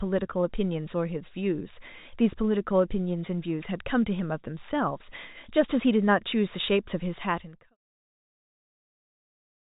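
Nothing in this speech recording sounds technically broken: it has the narrow band of G.711 telephone coding, with nothing above 3.8 kHz, and its level eases down in a smooth fade out from around 7 s to 7.77 s.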